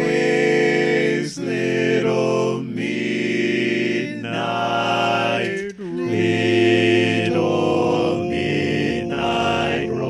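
At 7.69 s the pace suddenly jumps and runs at 1.91 times speed through to the end, yet the pitch doesn't budge. That's a time-stretched section, likely software squeezing the audio to fit a length by dropping short pieces, so it sounds rushed.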